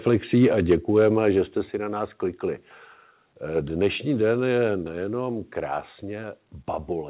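Microphone overload appears twice in this speech. From 0.07 to 0.15 s, peaks run about 2 dB past the converter's limit. From 0.42 to 1.29 s, they run about 3 dB over. The tops of the loudest waves are sliced flat, a small share of samples each time. That gives the strongest syllables a harsh, crackly edge. The likely cause is a microphone input set too high, so the converter ran out of range.

The microphone volume is stepped down three times. At 0.72 s the level drops by about 2 dB, just before "že jste". At 1.71 s it falls by about 4 dB, between "že jste" and "na nás klikli". At 4.83 s it falls by about 3 dB, right after "den je". Each drop is sudden, and it takes the voice and background down together. The first comes in the middle of the clipped stretch. This is likely the call software cutting the input gain in steps after hearing overload.

The call path itself sounds narrowband. Nothing reaches above 4 kHz, which fits a G.711 A-law stream at 64 kbps.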